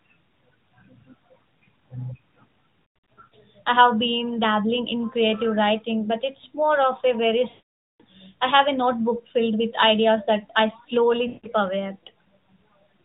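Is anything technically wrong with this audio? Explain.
Yes, there are lost AMR speech frames at 3.14 to 3.34 s before "I have been dabbling", at 7.50 to 8.01 s between "more of a very" and "I have a notebook", and at 11.28 to 11.48 s after "with ideas that I". Frames corrupted in transmission were concealed by repeating prior pitch and vocal-tract settings at decaying gain, so the voice smears, then fades out. The longest gap sounds like a half-second dropout. Speech is band-limited below 4 kHz by the AMR narrowband codec.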